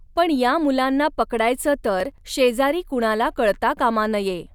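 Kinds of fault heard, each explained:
Processor overload crackle: the processor missed several short buffer deadlines in a row, about 5 ms each, skipping audio and leaving hard-edged gaps heard as gritty crackle from 2.00 to 2.21 s, after "पण या मुलांना पकडायचं".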